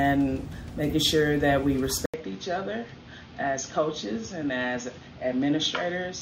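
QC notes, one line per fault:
2.06–6.21 s, input switched to a poorer device: after an 80 ms gap the sound turns duller and somewhat quieter, nothing above 6.7 kHz, faint new background noise, likely a narrower-band microphone. Spectrogram shows a hard ceiling; waveform a dropout, then a smaller envelope.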